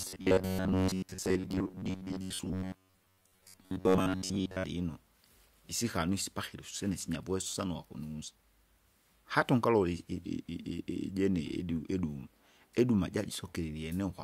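From 0.01 s to 4.64 s the speech takes on robotic sound from repeated short buffers: a rigid, metallic buzz near 94 Hz that tracks the words only loosely. That pitch corresponds to a segment of about 10.7 ms. The likely cause is new audio arriving too slowly, so playback keeps looping the last short buffer while the incoming material is skipped. For most of that stretch the output is repeated fill rather than fresh signal.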